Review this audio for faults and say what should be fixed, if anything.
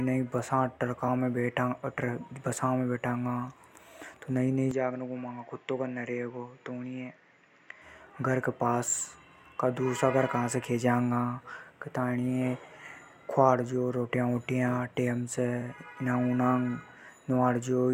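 Damaged data in a compressed stream at 1.07 s: corrupted bytes made the decoder lose frame sync and resync, leaving a brief glitch in the speech. Prevent it by delivering the stream over a transport with checksums or retransmission so corrupted frames are caught before decoding.

From 4.71 s to 7.82 s the input likely switched to a poorer device, cutting everything above 7.6 kHz, so the speech turns dull and drops about 5 dB with no gap at the switch. Its own background noise sits roughly 40 dB down. Prevent it by locking the recording to one fixed input and disabling automatic device or headset-profile switching.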